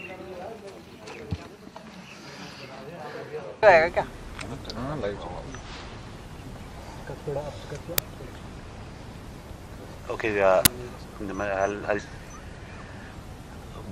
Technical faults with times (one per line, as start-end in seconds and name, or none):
7.98 uninitialised buffer
10.65 uninitialised buffer